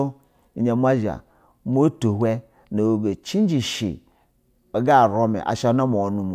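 No technical faults are audible anywhere in this recording.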